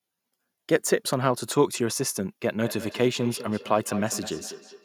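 From 2.64 s to the end, feedback echo between two devices: a second device replays this microphone's signal, which is picked up again, so each word returns roughly every 200 ms, peaking about 14 dB below the speech. On a spectrogram, fainter copies of each syllable trail at even spacing.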